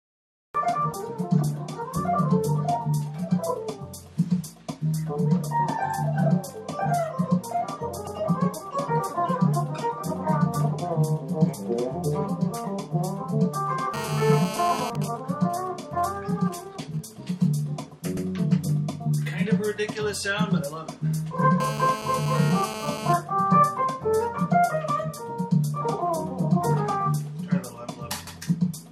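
Cut-off start, 0 to 0.55 s: the audio opens in digital silence and then cuts in abruptly in the middle of a sound at 0.55 s, with no attack or fade, because the recording or stream began late. Overlapping chunks at 8.07–8.17 s, 18.17–18.27 s and 28.27–28.37 s: about 100 ms plays twice at each join, heard as a stutter every 10 s, because the audio was handled in 10-second chunks that each start before the previous one ended. GSM phone buzz at 13.94–14.90 s (about −7 dB relative to the signal) and 21.60–23.13 s (about −9 dB): a hard, raspy 217 Hz buzz with many harmonics, unrelated to the sound, from a nearby 2G phone in a call whose 217-per-second radio bursts are rectified by the audio circuit. GSM signalling bursts at 14.95–17.60 s: faint, even ticks with a longer 217 Hz buzz twice a second, roughly 20 dB below the signal, as a nearby 2G phone, with its user silent in the call, sends only sparse groups of bursts.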